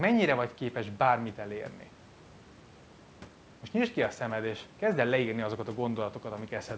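No faults: the speech sits in a call band with nothing above 8 kHz, consistent with a G.722 call path, and the room noise runs about 27 dB below it.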